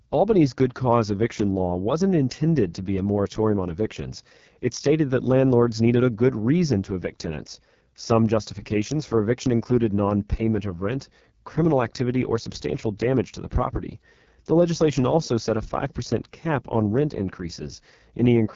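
Speech, carrying heavy AMR wideband (HD Voice) codec damage for its whole length. The voice has the rough, raspy, buzzy grain of a low-rate pulse-excited vocal tract model, which points to the lowest AMR-WB mode, around 6.6 kbit/s, where too few bits remain to shape the excitation. The upper band is synthetic noise rather than real detail, and nothing is present above 7.2 kHz, the ceiling of the wideband codec.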